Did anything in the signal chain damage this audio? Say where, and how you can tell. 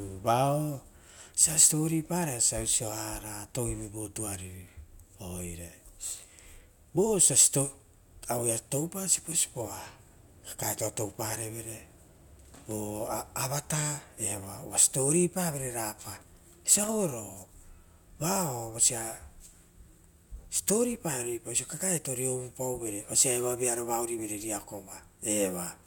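Yes. At 16.75 to 16.89 s the speech is broken by a short, ragged burst of crackle and scratching lasting about 140 ms, which is the signature of loose connector crackle in the analogue wiring. A worn or dirty contact in a plug or jack was shifting, so the circuit opened and closed many times in quick succession. That chopped the signal into fragments, and each make or break of any DC on the line added its own pop.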